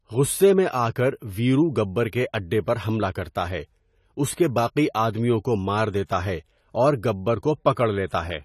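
From start to finish the speech carries AAC compression, likely from an AAC-LC encoder squeezed to a low bitrate, which fits about 32 kbps. With too few bits, the encoder discards fine spectral detail and cuts everything above 14 kHz, leaving the top of the sound empty. The damage is plainly audible: the speech sounds dull and smeared, with a warbly, fizzy texture clinging to sibilants and held vowels.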